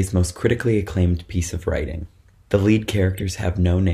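Near the end there's a corrupt frame decoded, from 3.17 to 3.23 s: a short, fairly loud glitch peaking around -15 dBFS. A couple of compressed frames got bit-flipped and the decoder played them anyway, misplacing energy across the spectrum.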